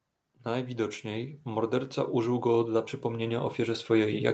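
Automatic gain rising runs from 0.47 s to the end of this speech clip at 4.33 s: the call's gain control judged the input too quiet and kept pushing its gain up, so the voice and the background noise beneath it swell together in a slow, steady climb rather than a sudden jump. Nothing above 8 kHz comes through, consistent with a wideband Opus call path at a modest bitrate such as 32 kbps.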